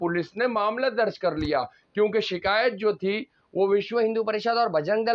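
From the start to 3.92 s there's a wrong sample rate: everything runs about 8% slow and roughly 1.5 semitones flat, which fits 24 kHz material played at 22 kHz.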